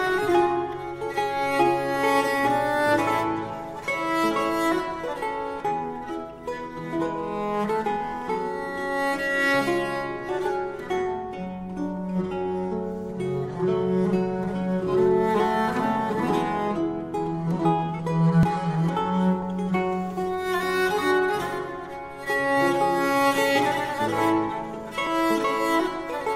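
At 18.43 s there's a small jump forward in the sound, as if a sliver went missing, something like 20 ms. Another, shorter skip follows at 19.42 s, around 10 ms gone, and a bigger one lands at 25.07 s, roughly 30 ms. No gaps of silence, just the two sides butted together. The likely cause is a dropped buffer (overrun), where the hardware overwrote samples before the software grabbed them.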